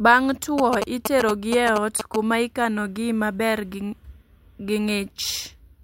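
From 0.58 s to 2.16 s a galloping dit-dit-dit of short buzzes cuts across the speech, roughly as loud as the talker. These are GSM signalling bursts. A nearby 2G phone is exchanging brief groups of radio bursts with the network, and the audio circuit rectifies them into sound. The buzz sits at about 217 Hz, the burst repetition rate of 216.7 Hz.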